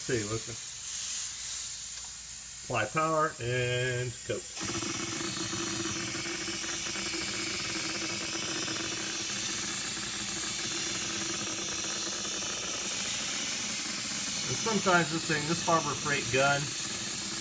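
Nothing stood out on listening to the clip.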